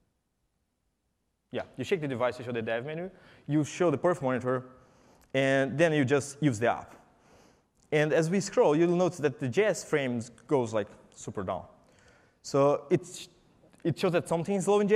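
Nothing goes wrong anywhere in this clip; there's simply no technical fault to point to.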